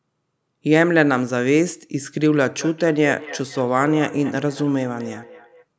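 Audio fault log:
2.58–5.66 s feedback echo between two devices: a second device plays back the call and this microphone picks it up again, so the speech returns roughly every fifth of a second, peaking about 15 dB below it.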